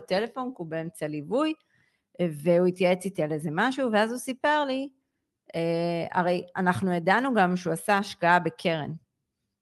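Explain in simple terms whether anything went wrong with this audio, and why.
Nothing went wrong with this speech recording. It passed through an internet call connection that worked normally, and you can hear the call's audio compression in the way the highest frequencies fade out above roughly 12 kHz.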